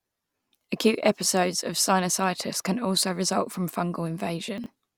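A brief jumbled, garbled moment lands from 4.58 to 4.66 s, near the end of the speech. The cause is chunks out of order: one 20 ms chunk arrived late and played three chunks behind its place, leaving three hard joins.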